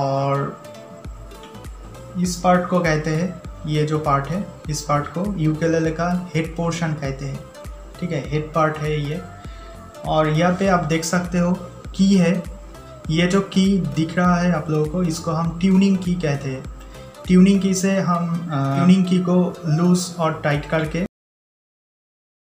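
At 21.06 s the sound stops abruptly, mid-event, and falls straight into digital silence with no natural decay for the remaining second and a half. This is a cut-off end: the final buffers were never written or played back, so the recording was truncated.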